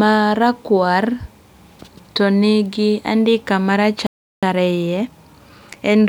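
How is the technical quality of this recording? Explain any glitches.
The speech has two linked glitches near its end. From 4.07 to 4.43 s it cuts to silence for about 0.36 s: a playback stall, likely the player running short of data or its thread blocking until output resumed. From 4.43 to 6.05 s the speech sounds hurried, about 1.15 times normal speed, yet keeps its pitch. That is time-compressed catch-up: the player trims its backlog by removing small slices and cross-fading the joins.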